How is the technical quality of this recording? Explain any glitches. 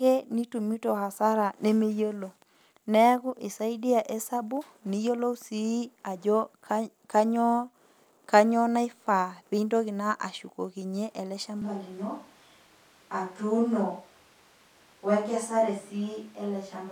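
The recording has one clear fault near the end. From 11.62 s, right after "pintoki naa ashukokinyie", to the end, there is a switch to a distant microphone. The speech abruptly turns roomy and hollow, with thinner bass and room noise about 30 dB below the speech, though the overall level barely changes. The likely cause is that the close microphone dropped out, leaving a farther one to carry the audio. Unlike added reverb or an EQ change, the room sound and background noise arrive together in a single instant cut.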